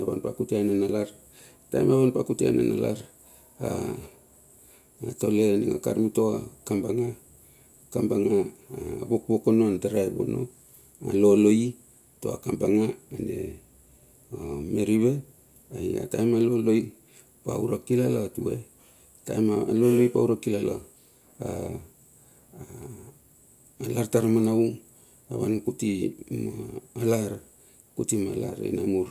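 Nothing goes wrong anywhere in this bit of speech, so there's no technical fault to point to at any moment.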